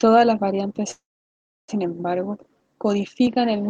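Just after "las variantes", at 0.91 s, the speech stops short. A brief tail of buzzy or hissy sound carries on and fades, then about 0.67 s of silence follows. The speech resumes at 1.70 s exactly where it broke off. Nothing is lost, but the rest of the clip now runs about 0.77 s late. This is a call audio freeze. The likely cause is delayed packets draining the jitter buffer, so the receiver padded the gap until the stream returned.

At 3.27 s the tone changes abruptly and stays changed to the end. There is no silence at the switch. From that point nothing comes through above 6.3 kHz, so the speech sounds duller and narrower. A faint new background noise appears, far below the speech. The loudness stays roughly the same. This fits an input switched to a poorer device, likely another microphone or a headset's call profile taking over mid-recording.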